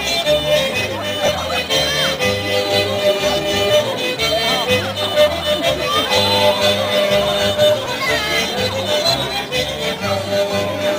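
Lost LE Audio frames, at 1.26 to 1.28 s, 6.17 s and 7.85 s, led the LC3 decoder to patch gaps with noisy copies of the previous spectrum, briefly smearing the sound.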